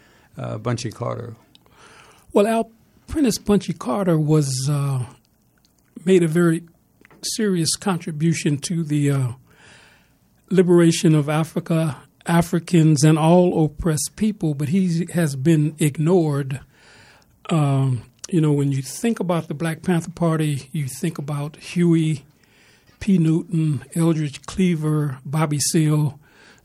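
No dropouts, clicks, distortion or level jumps are audible anywhere in the recording.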